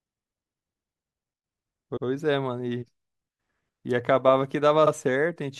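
Repeated frames: a short run of compressed frames was delivered twice, so the decoder replays 96 ms of speech at 1.96 s and 48 ms at 4.86 s. Each one is a brief stutter.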